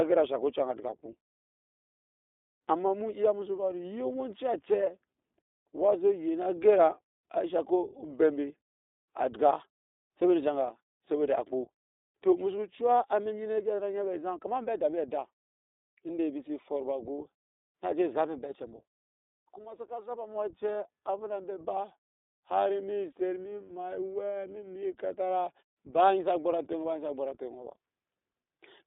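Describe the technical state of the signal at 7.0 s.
At 7.0 s, as across the whole recording, the speech passes through the iLBC codec, and the damage is plainly audible. The band is confined to roughly 300 Hz to 3.7 kHz. Each 20 ms frame has its excitation coded on its own, which fits the 15.2 kbps mode and gives a rough, slightly synthetic edge. A simple telephone band-limit would sound dull but smooth; this grain is what sets the codec apart. The silent pauses are working as intended.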